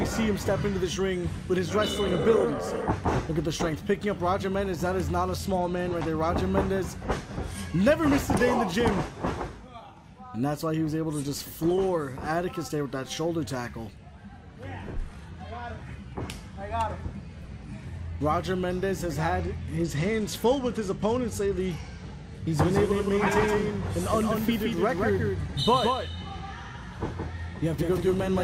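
From 5.39 to 6.29 s, and again from 19.40 to 22.33 s, there is a Bluetooth SBC bit pool drop. The treble dulls and gritty noise rises. This fits the bit pool falling from 28 to 12, near 96 kbps.

From 22.49 s to the end, the sound becomes a doubled audio track. A full-band copy trails by about 150 ms, roughly 5 dB quieter, starting abruptly. It is likely a second, slower capture path.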